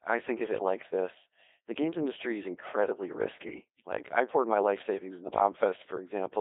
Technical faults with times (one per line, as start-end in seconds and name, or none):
0.00-6.40 Codec 2 vocoder